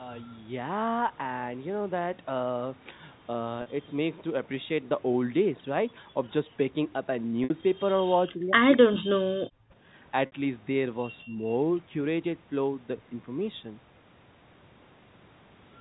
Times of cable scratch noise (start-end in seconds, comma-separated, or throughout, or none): none